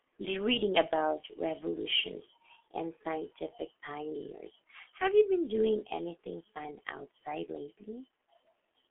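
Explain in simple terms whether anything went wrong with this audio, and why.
The speech sounds muffled and hoarse from start to finish, with smeared consonants. That's G.723.1 codec damage: an old internet-phone codec that keeps nothing above about 3.8 kHz and models the voice in coarse 30 ms chunks, so fine detail is lost.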